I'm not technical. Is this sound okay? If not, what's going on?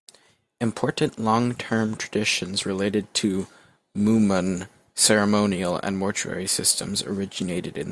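Yes, this one sounds fine, and nothing in the recording jumps out as a technical problem.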